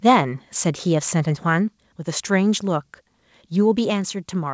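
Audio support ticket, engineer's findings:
Harsh crackle on the first peak, 0.06–0.16 s. Microphone overload, likely input gain set too high: peaks about 8 dB past converter full scale, a sizeable fraction of waveform tops flattened.

Abrupt drops in voice and background at 0.1, 1.68 and 3.9 s, about 2, 3 and 4 dB. Microphone volume stepped down, likely by call software lowering device input in single steps. G.722 path audible as nothing above 8 kHz.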